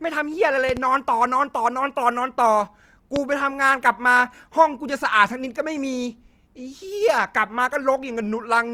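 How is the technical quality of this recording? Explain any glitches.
The recording has two clear problems: a grainy, compressed texture across the whole clip, and loud pops near the start.

Throughout, the speech carries Opus compression, most likely the encoder's music (CELT) mode working at a low bitrate, around 24 kbps by the sound of it. With too few bits, the encoder preserves each band's overall energy but fills in detail by copying lower bands or injecting noise. The full bandwidth survives, yet the voice turns audibly rough and grainy rather than swirly.

Two loud pop events interrupt the speech. The first, from 0.69 to 0.79 s, is a pair of pops in quick succession, peaking about 10 dB above the speech. The second is a single pop from 3.16 to 3.19 s, roughly 15 dB above it. Each is likely a sudden voltage step or pulse, from a connector, switch, static discharge or driver glitch, added onto the signal. 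They land as abrupt thumps while the speech continues underneath.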